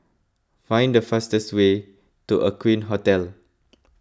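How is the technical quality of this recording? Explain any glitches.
No glitches can be heard anywhere in this speech recording, and the signal stays steady and intact throughout.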